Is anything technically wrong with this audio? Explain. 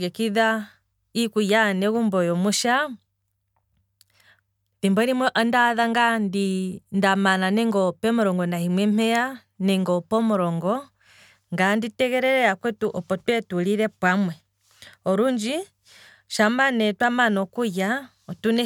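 No, the speech signal shows no technical faults.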